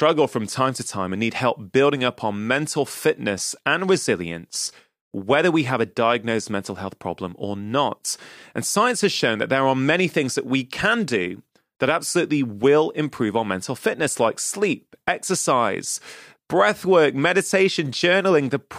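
Nothing stood out as a technical problem on listening to the speech here.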